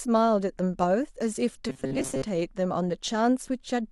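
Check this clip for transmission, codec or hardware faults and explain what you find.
One fault is audible. Robotic sound from repeated short buffers, 1.69 to 2.23 s: late audio was likely filled by looping a stretch of about 7.5 ms, producing a rigid 133 Hz metallic buzz over the speech.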